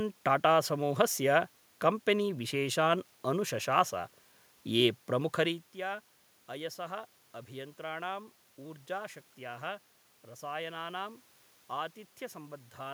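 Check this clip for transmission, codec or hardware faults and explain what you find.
No faults turn up in this clip to explain.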